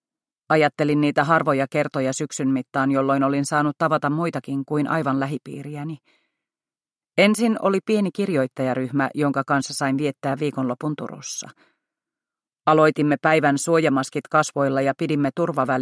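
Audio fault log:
Nothing stood out on listening to this audio.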